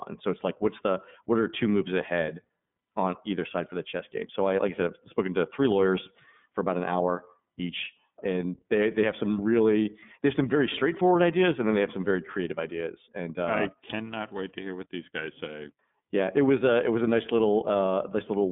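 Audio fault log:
Throughout, iLBC codec: the speech is confined to a narrow line band of about 150 Hz to 3.6 kHz and carries a plainly audible rough, synthetic edge, because each frame's excitation is coded independently of the previous one, which fits 30 ms frames at the 13.33 kbps mode. A plain telephone band-limit would leave the speech smooth within that band; here the graininess sits inside the passband, marking it as coding damage rather than filtering alone.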